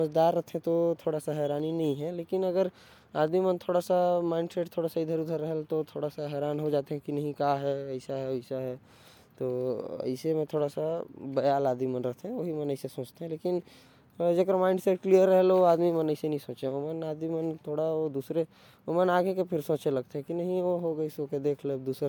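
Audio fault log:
No faults detected in the speech recording.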